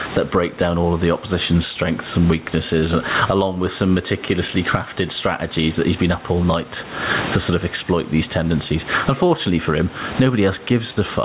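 Gain pumping runs through the whole speech clip. The gain swings around 20 dB. The likely cause is input gain set far too high, with a fast limiter clamping down on peaks.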